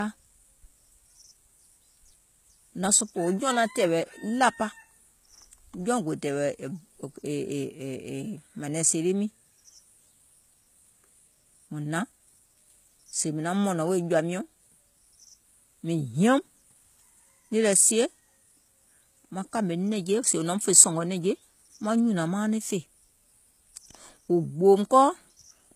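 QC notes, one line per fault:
Throughout: low-bitrate audio saved at a high bitrate. Nothing is present above 14.9 kHz. The speech keeps the artefacts of heavy coding. This likely points to an HE-AAC encode near 20 kbit/s, later resaved as high-rate MP3. The resave cannot restore lost detail.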